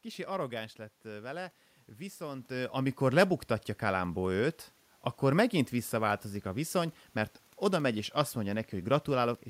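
No technical faults are present.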